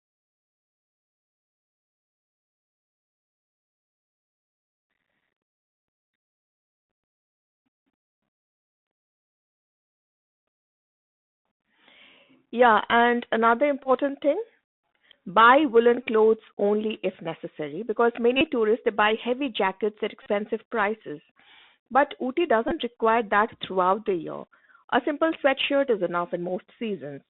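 Throughout, the Bluetooth CVSD headset codec confines speech to about 200 Hz to 3.7 kHz. Its one-bit coding, consistent with 64 kbps, leaves granular hiss and scratchy sibilants.

Bluetooth headset packet repeats then cause short buzzes, with lost packets replaced by the previous one. They occur at 13.83 s, 16.03 s, 18.37 s, 20.23 s and 22.68 s, each losing 23 to 41 ms. The last is scattered, with its longest run around 20 ms.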